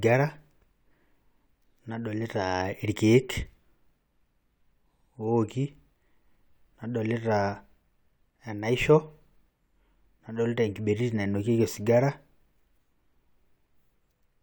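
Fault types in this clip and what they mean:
No technical fault can be heard anywhere in this speech recording. Nothing in it breaks, drops out or distorts.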